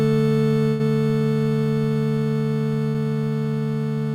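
A burst of packet loss hits at 0.67 to 0.84 s, and another at 2.88 to 2.97 s. Each time the receiver stretches the last sound into a fading hold, about 120 ms then 60 ms, before playback jumps ahead with that stretch of audio missing.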